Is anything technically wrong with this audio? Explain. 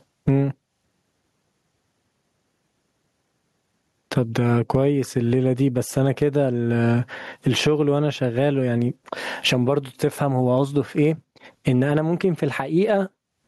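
Yes. Gain pumping runs through the whole speech clip: loud and soft parts are pushed closer in level and the sound is squashed, a level swing of roughly 25 dB. The likely cause is input gain set far too high, with a fast limiter or compressor clamping down on each loud sound and then releasing. The waveform looks flattened, with peaks and quiet stretches pressed close in level.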